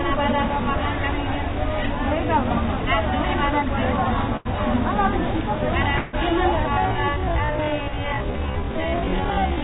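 An everyday-sound recording carried over a call path whose narrow bandwidth and coding noise fit G.711 mu-law at 64 kbps. It has three faults. A burst of packet loss at 4.37 to 4.48 s leaves a gap of about 81 ms, which the receiver fills by continuing the last sound and fading it down. About 80 ms of audio is missing, and the sound picks up again further on with that stretch gone.

At 5.97 to 6.16 s there is a longer hole, filled with about 159 ms of the same fading continuation of the preceding sound. It never drops to silence, and about 160 ms of material is skipped when the audio resumes. This is likely a long network dropout, where nothing arrived for that stretch and the receiver concealed the gap until fresh audio came through.

From 6.64 s to the end, the pace abruptly halves while the pitch stays where it was. Events drag at half speed. This points to a time-stretched section, stretched by software to twice its length with pitch held constant.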